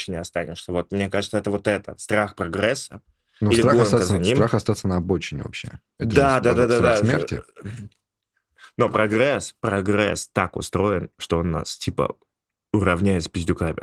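No technical faults are audible in this speech clip; the light coding texture fits voice-mode Opus compression working normally.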